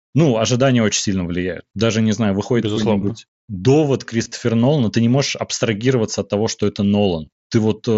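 Concealed Bluetooth headset packet loss hits at 3.02 s, 4.24 to 4.32 s, and 7.26 s. Lost audio is patched from the preceding waveform. The 4.24 s cluster, scattered over 75 ms, buzzes briefly.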